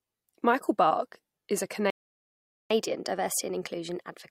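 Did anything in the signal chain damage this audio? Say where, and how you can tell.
Yes, at the playback stage. Right after "is a", the speech drops to silence at 1.90 s and stays dead for about 0.8 s, until 2.70 s, then resumes where it left off. That's a playback stall, likely the player running dry or its thread getting blocked.

Then comes catch-up at higher speed. From 2.70 s to the end, everything runs at 1.1x with pitch up by roughly a semitone and a half. The player is resampling its backlog faster to recover the lost time, so tempo and pitch rise together.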